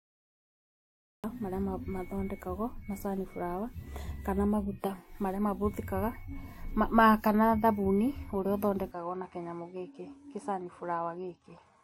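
Across the whole clip, the speech carries smeared, swirly artefacts of two different kinds layered together, and a spectrogram shows nothing above 16.7 kHz. The likely cause is transcoding between lossy codecs, apparently a WMA stage followed by a low-rate MP3.

The cut-off start leaves digital silence, a flat waveform line, from 0 to 1.24 s. Speech then jumps in mid-sound with no attack or fade.

At 8.91 s, with no gap, the band abruptly narrows to nothing above 10.6 kHz, the level drops a few decibels, and a faint new noise floor appears. This likely comes from the input being switched to a poorer device.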